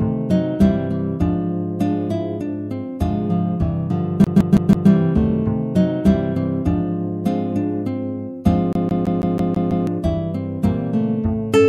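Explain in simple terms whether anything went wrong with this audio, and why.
The CD got stuck on one turn. A scratch kept knocking the laser back one track at the same point on each spin of the disc, so the player replayed the same short piece instead of moving on. You hear this as a fast, even stutter: a slice about 0.16 s long repeats, with a brief dropout at each jump. It happens four times from 4.24 to 4.90 s, then seven times from 8.73 to 9.87 s.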